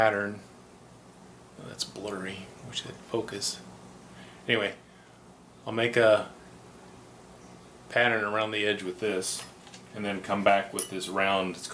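Nothing is technically wrong with the clip; no fault can be heard anywhere in the audio.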